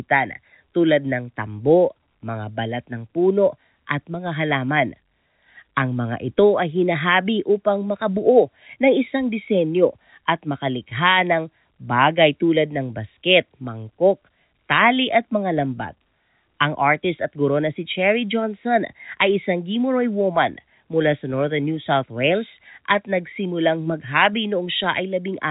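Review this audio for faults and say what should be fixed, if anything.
Nothing stood out on listening to this speech, which comes over a telephone-band path with nothing above about 3.8 kHz, so there is nothing here that needs fixing.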